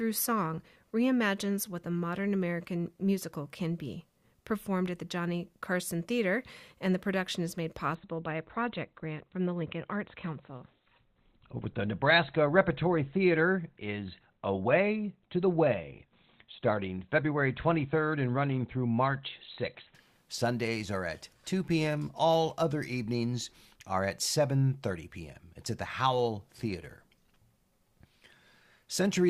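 From 7.95 to 19.95 s the adaptive stream switches to a lower bitrate, fitting about 16 kbit/s: speech suddenly loses everything above 4.4 kHz, without a gap.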